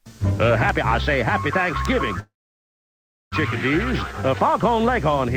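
From 2.19 to 3.34 s a call audio freeze stretches the last sound into a brief fading buzz, then about 1 s of silence. Likely packets stalled; afterwards the audio resumes where it stopped with nothing lost, unlike a dropout.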